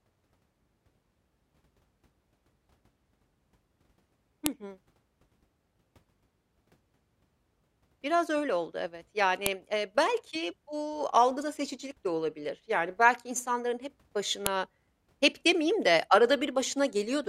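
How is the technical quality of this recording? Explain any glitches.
The recording has one recurring glitch, a file header played as audio. At 4.46, 9.46 and 14.46 s, exactly 5 s apart, a sharp, loud snap cuts through the speech. Joined WAV pieces kept their headers, and those bytes play as samples. On a waveform each one is a thin spike, and on a spectrogram it is a vertical broadband line.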